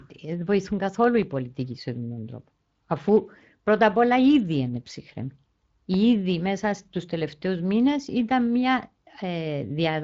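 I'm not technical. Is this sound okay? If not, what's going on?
No. Speex codec damage runs through the whole clip: this older internet-call format squeezes the speech so hard that too little detail survives, leaving it hoarse and noisy, with the top end replaced by a hiss-like fill.

Loud pops occur at 1.04 to 1.24 s, a double pop just before "πολιτικοί σε αυτόν τον", and at 5.94 to 5.96 s, a single pop before "μέσα στου τελευταίου μήνε". These sharp thumps sit on top of the speech, which continues underneath. The likely cause is a sudden electrical jolt from a plug, switch or static.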